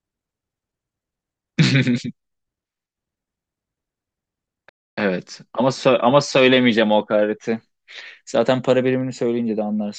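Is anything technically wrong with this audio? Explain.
Yes. At 4.69 to 4.97 s, a rebuffering stall: playback exhausted its buffered audio and waited, inserting 0.28 s of silence before the speech resumes exactly where it stopped.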